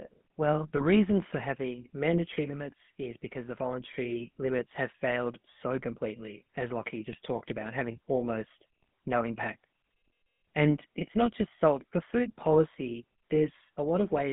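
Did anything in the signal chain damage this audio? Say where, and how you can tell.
Yes. At the codec stage, GSM full-rate coding gives the whole clip a buzzy, gravelly roughness, and the band runs from 150 Hz to 3.5 kHz, consistent with 13 kbps GSM.

On the network, GSM bit errors cause brief squawks of about 50 ms each. They occur at 0.77 s, before "reason for having mandatory"; at 7.12 s, before "talked about having almost"; and at 8.82 s, between that phrase and "no impact". Corrupted decoder parameters distort two or three frames each time.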